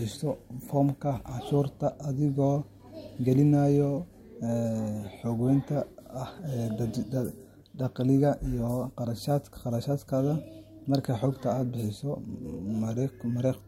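Nothing in this bit of speech trips any alarm, so there's no technical fault to point to here.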